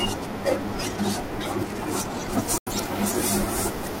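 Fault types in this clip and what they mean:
Pre-emphasis left on: From 2.33 s to the end, treble stays boosted because the matching de-emphasis was never applied. It sits about 8 dB up at 10 kHz relative to 1 kHz and follows the CD 50/15 µs shelf curve, not a microphone's uneven brightness. Sibilance turns hard and thin.
Digital broadcast dropout: The receiver mutes from 2.58 to 2.72 s with a fast 3 ms fade, then picks up again mid-programme. About 85 ms of sound is simply missing, which fits two lost frames. It leaves clean silence, not the smeared or repeated fill of concealment.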